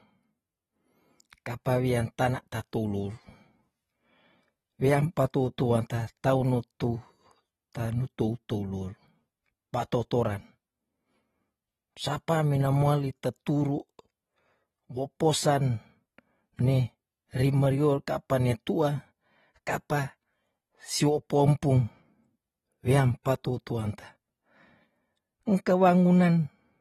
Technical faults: AAC compression

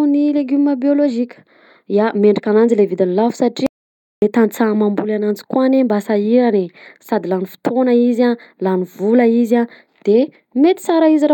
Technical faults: playback stall

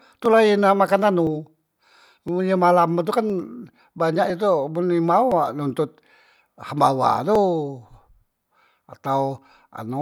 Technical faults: periodic USB or driver dropouts

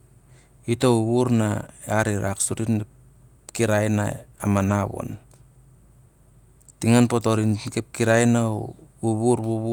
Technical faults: lost packet rebuilt from error correction

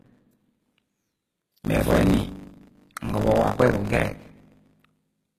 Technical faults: buffer tearing; HE-AAC compression

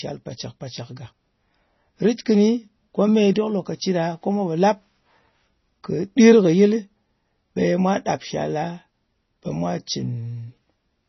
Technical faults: MP3 compression

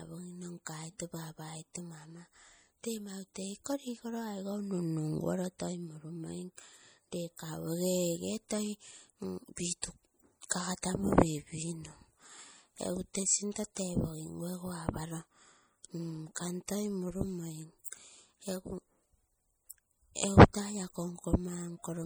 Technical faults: MP3 compression; pre-echo

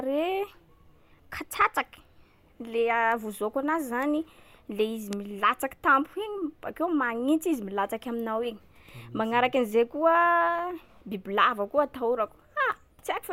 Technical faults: bit error spike

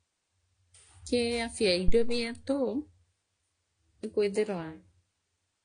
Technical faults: AAC compression; phantom power thump

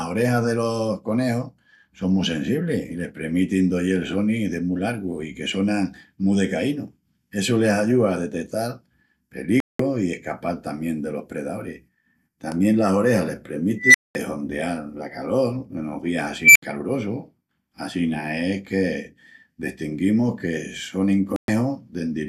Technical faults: digital broadcast dropout; unstable filter

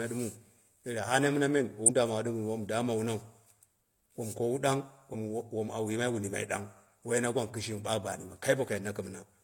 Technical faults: damaged data in a compressed stream

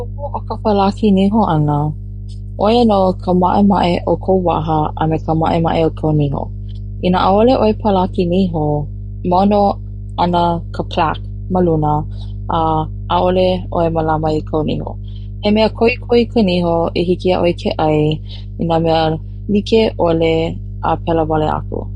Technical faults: mains hum

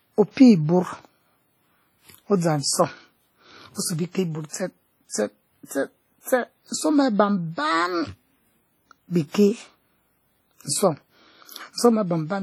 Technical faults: WMA compression

